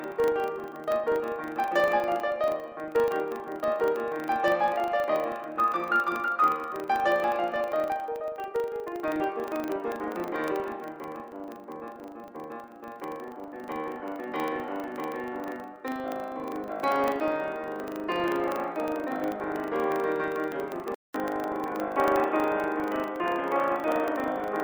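Throughout the music, a filter restarted on every block leaves a 25 Hz buzz. Each 40 ms block opens with a small transient that rises and falls with the level. At 20.94 s, after a 200 ms silence, the sound turns dull and boxy with a faint new noise floor. The loudness stays roughly the same. The likely cause is the input switching to a poorer device.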